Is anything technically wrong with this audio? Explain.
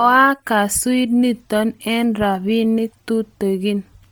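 Yes. Throughout the speech there is a breathy, grainy upper band, likely from Bluetooth LC3 compression at a low bitrate near 32 kbps. Unlike plain low-pass loss, the highs remain but are filled with noise.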